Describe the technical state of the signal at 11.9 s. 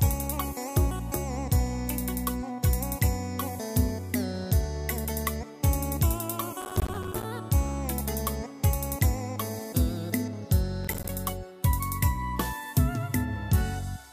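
At 11.9 s the signal is intact, with no audible fault at that point.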